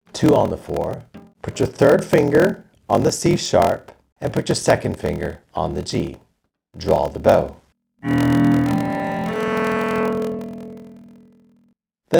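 A block size mismatch with zero padding runs throughout. Each block is written short, consistent with 1024 samples, and the remainder is filled with zeros. The gaps buzz at 41.7 Hz, and the audio plays at 0.889 times normal speed at about its normal pitch.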